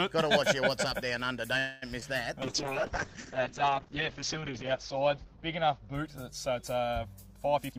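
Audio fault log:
1.59–1.84 s: call audio freeze. The sound stalls for about a quarter of a second, stretched into a fading buzz or hiss. It then resumes where it stopped, with nothing lost. This likely comes from delayed packets draining the jitter buffer, so the receiver extended the last sound.
2.00–2.03 s and 2.03–2.06 s: short concealed packet loss. Two brief holes in a row, each about 20 ms, are patched with guessed audio that blends back into the real signal. The join sounds like a quick smear or wobble, and a short sound may vanish.
2.43 s to the end: call bitrate drop. The sound turns coarse and watery. The top end narrows from about 20 kHz to about 8 kHz, which fits a fall from roughly 128 kbps to about 7 kbps. This happens when the bandwidth estimate collapses and Opus codes more crudely.
7.56–7.77 s: jitter buffer speed-up. The audio runs about 48 percent faster at the same pitch and sounds hurried. 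An overfull buffer was trimmed by cutting many short pitch-period pieces, removing roughly a tenth of a second to reduce delay.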